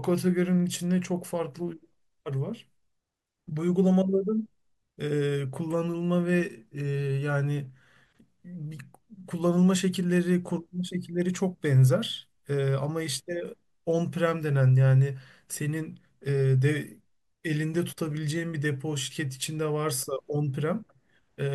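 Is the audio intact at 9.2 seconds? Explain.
Yes, at 9.2 seconds the speech runs through cleanly with no audible fault.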